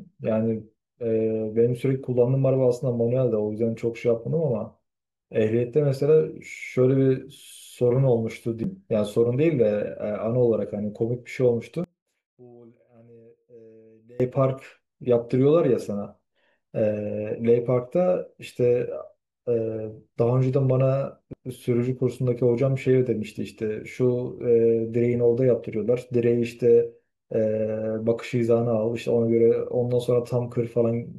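A speech recording with two kinds of fault. At 8.63 s and again at 21.33 s there is a CD skip: a tiny tick where the output mutes for only a few milliseconds, after which the speech resumes from a different point, as if the laser had jumped to another turn of the disc's spiral. A plain dropout would silence the sound and then continue where it left off. Here the speech lands somewhere else, so the flow jumps abruptly. From 11.84 s to 14.20 s the level falls by about 27 dB and what remains is a faint copy, with the background dropping away too. This points to one channel inverted, likely with the two channels summed to mono, so everything common to both cancels and only their small difference survives. A simple fade or gain drop would keep the same tone at a lower volume. Here everything, background included, nearly vanishes at once, and that fits cancellation.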